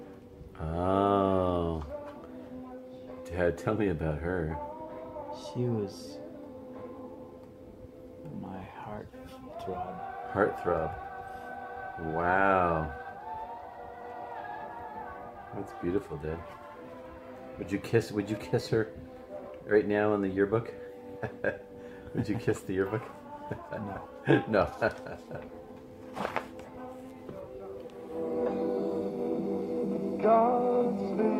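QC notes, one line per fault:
15.01 s and 17.55 s, compressed frames skipped: the audio hops forward by about 20 ms at each spot, which fits one 20 ms frame missing or being thrown out by the decoder.
23.95 s and 29.6 s, compressed frames skipped: the same kind of skip, but the jump is around 40 ms, which points to two frames dropped back to back.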